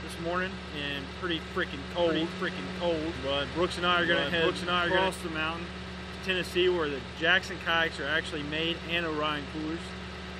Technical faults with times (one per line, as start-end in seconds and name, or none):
2.00-5.08 doubled audio track